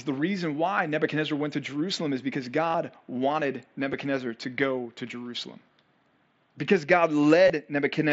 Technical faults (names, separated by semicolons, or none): concealed Bluetooth headset packet loss